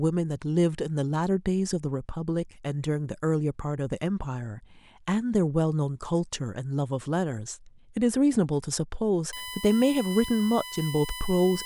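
A fixed-pitch whine enters at 9.33 s and holds to the end at 11.65 s, built on a 1 kHz tone with its strongest component at 3 kHz, roughly 15 dB below the speech. This is USB whine: current drawn in 1 ms bus frames leaking into the audio through power or ground.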